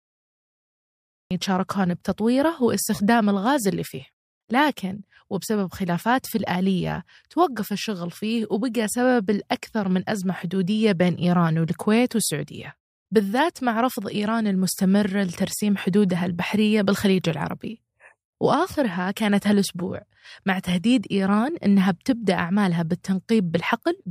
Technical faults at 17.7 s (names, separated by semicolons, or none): none